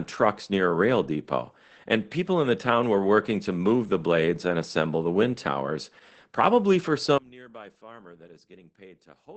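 Speech runs through Opus voice compression for the whole clip: nothing reaches above 8.6 kHz, and the voice sounds muffled, hoarse and faintly robotic, which fits the SILK coder at about 12 kbps. A plain low-pass filter would dull the top without this coarse, buzzy texture in the voice itself. From 7.18 s to the end, right after "wind towers probably for", the level falls by about 24 dB and the centred voice drops to a faint residue. This is likely one channel inverted, cancelling in a mono sum; a fade or gain drop would lower the voice evenly rather than leaving only a mismatch residue.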